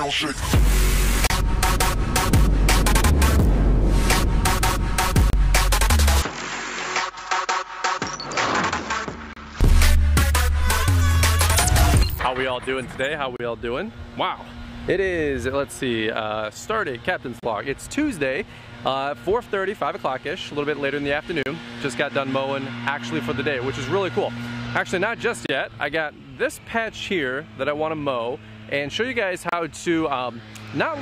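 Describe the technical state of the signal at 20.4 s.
At 20.4 s the signal is intact, with no dropout, distortion, glitch or other fault audible at that moment.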